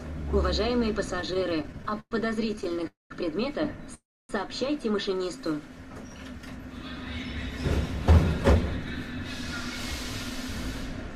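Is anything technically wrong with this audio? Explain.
Yes. The audio has two kinds of network playback fault, both concentrated in the first half.

Repeated stalls (stutter) run from 1.11 to 2.13 s and again from 2.51 to 2.87 s. Packets kept arriving later than they were needed, so the jitter buffer emptied again and again and the receiver stretched the last sound to fill each gap. The first span has 20 gaps totalling about 300 ms, nearly a third of that stretch, with the longest at 110 ms. The second has 8 shorter gaps of up to 12 ms, totalling 83 ms. Nothing is lost, but the sound drags and catches. On a spectrogram this shows as repeated, held spectral columns smeared horizontally. In the waveform it appears as short, looped-looking segments.

Call audio freezes follow at 2.87 to 3.12 s and 3.94 to 4.31 s, likely because packets were held up in transit until the buffer ran dry. Each begins with the last sound carried on briefly and fading, then falls silent for about 170 ms and about 280 ms respectively before playback resumes where it stopped. 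That inserts roughly 230 ms and 350 ms of delay. A spectrogram shows a fading smear ending in a blank band, and the waveform goes flat.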